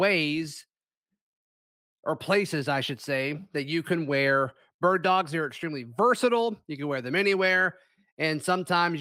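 No technical faults can be heard anywhere in this speech recording.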